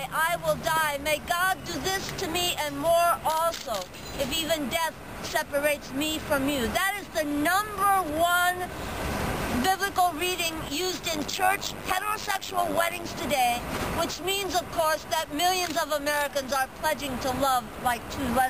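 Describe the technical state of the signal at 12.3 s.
Overlap-add ripple runs from 11.13 to 13.07 s. Mismatched frame overlap makes the level dip about 11 dB roughly 100 times a second, a metallic buzz with extra tones around each note.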